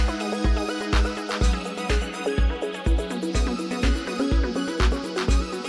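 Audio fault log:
Nothing stood out on listening.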